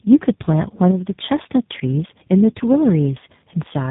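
From start to end, the speech shows tandem speech coding. It sounds like three speech codecs in a row, likely ending in G.729A at 8 kbit/s. Each codec met the signal already damaged by the one before. So the losses stacked. Nothing remains above about 3.8 kHz. The speech sounds muffled and rough. Vowels warble. The damage is heavier than any single codec would cause.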